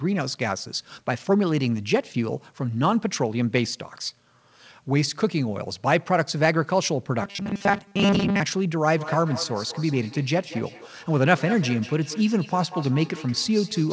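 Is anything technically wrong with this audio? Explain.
Yes, there are two faults in this speech clip.

From 7.23 to 8.40 s the speech turns into a rigid, metallic buzz at 200 Hz that only roughly tracks the words. This is robotic sound from repeated short buffers, likely caused by audio arriving too seldom, so a 5 ms chunk is replayed while most of the real audio is skipped. Unlike an echo, nothing recurs later.

From 8.97 s to the end, each phrase comes back about a fifth of a second later, thinner and more ringing, peaking at about 15 dB below the speech. This is feedback echo between two devices: one device's playback re-enters the other's microphone, beyond either echo canceller's reach. Unlike the buzz, the original speech stays intact, with delayed copies laid on top.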